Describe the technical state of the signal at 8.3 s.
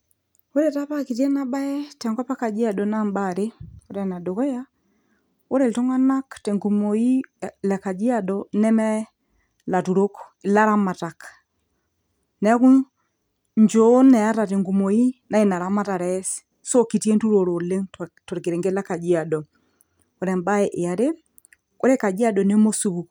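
At 8.3 s the speech signal is intact, with no audible fault at that moment.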